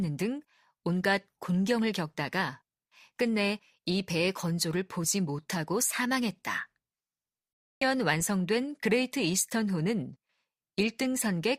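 At 7.81 s the speech jumps abruptly forward, with a brief click-like blip marking the join. The audio on either side does not connect: the sound is cut off and resumes at a later point rather than continuing. The likely cause is a stream segment skipped: one chunk of the segmented stream failed to arrive or load, and the player carried on from the next segment, leaving a gap in the programme.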